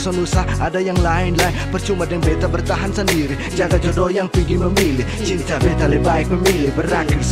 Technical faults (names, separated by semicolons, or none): none